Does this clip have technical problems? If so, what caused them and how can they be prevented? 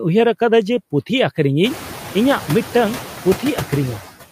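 Yes. Noise suppressor artifacts run through the whole clip. The suppressor treats steady sound in each frequency band as noise and lowers it frame by frame. It cuts only about 4 dB here. The noise dips between words and returns beneath them. The room noise jumps by about 21 dB near a second and a half and stays about 13 dB below the speech. To prevent this, reduce the room noise at the microphone.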